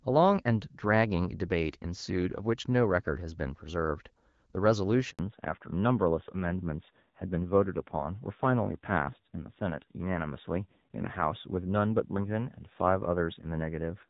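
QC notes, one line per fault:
5.11 to 5.19 s, handover gap: the sound dies off fast and there's a dead 80 ms hole where nothing gets through. That's the call being passed between networks with no speech frames arriving mid-switch, so whatever fell in that window is simply gone.
5.19 s to the end, fallback to narrowband: right after the gap everything above 4 kHz disappears and the speech goes duller and grittier. Sounds like the link dropped out of HD Voice, from roughly 12.65 kbit/s wideband, where there's only light codec damage before the gap, to a narrowband codec at about 7.4 kbit/s.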